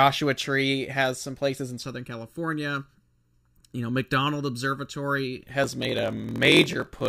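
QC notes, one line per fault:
1.83 to 5.44 s, channel delay (comb filtering): Just after "has some places in", the speech turns hollow and phasey. One channel lags the other by under a millisecond. When the two are summed to mono, the shared content cancels at evenly spaced frequencies. The first notch sits around 700 Hz, with more above it at regular intervals. These fixed gaps in the spectrum thin the speech and give it a boxy, filtered colour.
5.62 to 7.09 s, block size mismatch (padded): A steady buzz at 43.1 Hz rides under the speech to the end. One stage writes shorter blocks than the next reads, and the shortfall in each block is filled with silence. That makes a tiny gap at the block rate, which fits a 1024-sample read block. The speech also runs slow, at 0.938 times normal speed. The timbre stays.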